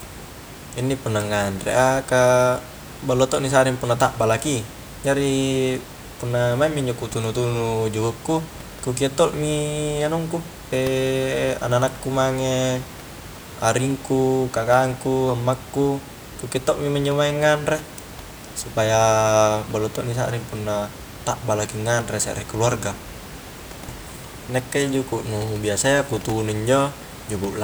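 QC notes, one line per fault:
Nothing to flag on this speech clip; there's just a bit of room background sitting about 17 dB under the talking, which is part of the recording itself.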